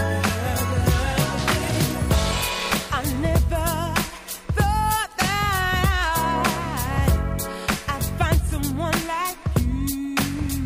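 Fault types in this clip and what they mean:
No technical faults can be heard anywhere in the signal.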